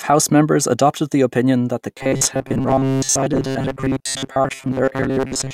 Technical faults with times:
1.95-5.54 robotic sound from repeated short buffers

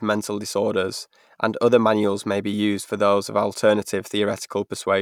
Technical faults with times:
none

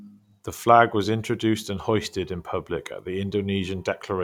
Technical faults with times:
none

